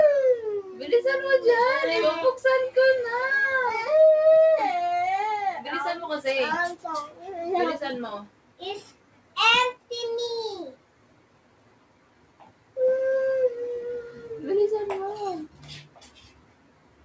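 The level pumps and flutters across the whole clip, with sustained parts and decaying tails repeatedly sinking by around 10 dB while sharper onsets push through. A noise suppressor applied to music or sounds is the cause: a processor built for speech treats steady, held material and ambience as noise and pulls it down. The sound cut by the noise suppressor is most obvious at 0.62–0.92 s, 7.07–7.32 s, 8.25–8.62 s, 8.91–9.36 s, 9.75–9.90 s, 10.74–12.76 s, 15.48–15.66 s and from 15.83 s to the end. Each dip reaches about 10–11 dB. The two-second stretch from 10.74 s and the closing tail are the longest cuts. The audio also passed through a call path using a wideband codec that leaves nothing above 8 kHz, which fits G.722 at 64 kbps.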